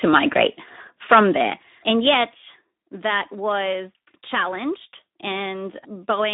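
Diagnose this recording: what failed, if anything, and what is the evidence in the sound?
The codec stage carries the main damage throughout: Speex narrowband coding, with artefacts that are plainly audible. The sound is confined to a line band of 200 Hz to 3.7 kHz, and the low-bit-rate behaviour fits roughly 11 kbps. With so few bits for the excitation signal, the CELP model leaves the audio hoarse and noisy. On a spectrogram, nothing appears above 3.7 kHz, and the harmonics look smeared and grainy rather than cleanly striated.

Microphone overload occurs at the converter input, 0.04 to 0.43 s and 1.11 to 1.23 s, with peaks about 5 dB beyond full scale. The loudest moments carry a harsh, crackling edge. The first stretch clips only an occasional peak, while the second, shorter one flattens a noticeably larger share. The waveform shows squared-off tops. The spectrogram shows brief vertical bands of broadband distortion. 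The likely cause is an input gain set too high.

Microphone volume stepped down happens at 1.50 s and again at 2.52 s, just before "that was challenged." Each time the level drops abruptly by about 4 dB, and voice and background fall together, so the whole signal chain is attenuated rather than only the source. On the waveform, the envelope shows a clean downward step. On the spectrogram, every frequency dims at once. This is likely the call software's automatic gain control reacting to the microphone being too loud.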